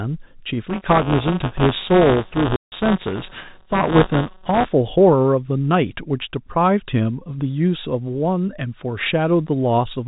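From 0.69 s to 4.66 s there is buffer tearing. The writer and the hardware reader of a ring buffer have slipped. Each period carries a slice of audio from about one lap earlier. The hard joins make a rattling buzz near 188 Hz, which fits a 256-sample buffer.

At 2.56 s the sound drops out for 160 ms, ending at 2.72 s. This is packet loss filled with silence. The lost stretch was replaced by a hole of dead air. Its edges are hard on both sides.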